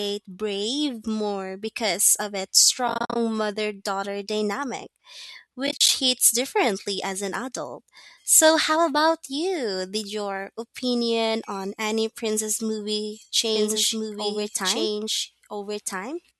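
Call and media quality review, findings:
AAC frame loss with muting, 2.88–3.16 s and 5.67–5.89 s. Scattered dropouts of about 50 and 40 ms; decoder zeroes lost frames, overlapping windows fade edges, soft holes.

Doubled audio track, 13.56 s to end. Abrupt full-band copy, about as loud, trailing roughly 1.5 s, without room colour; likely a second slower capture path mixed in.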